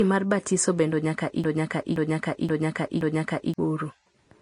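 From the start, the speech sounds hissy and grainy, with nothing above 10.6 kHz. The damage is plainly audible. This is likely Vorbis compression at a low setting, which fits a bitrate around 35 kbps. Coarse quantisation turns the finer treble detail into noise.

From 1.44 s to 3.54 s there is a broken-record loop. The same 0.52 s fragment plays back to back, four times over. Playback likely stalled and kept resending its last held piece. The audio due in that span is lost.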